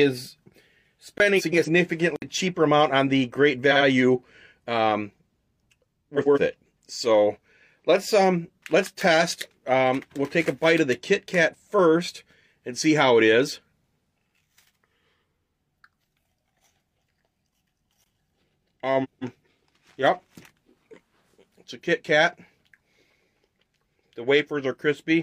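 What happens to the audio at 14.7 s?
Nothing goes wrong at 14.7 s: the audio carries on intact through that moment, with no dropout, click, glitch or other fault.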